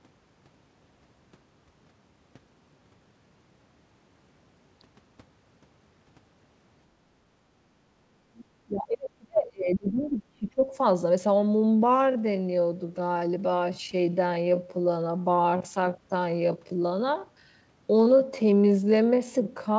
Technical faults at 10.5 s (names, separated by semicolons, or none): speech suppressed in double talk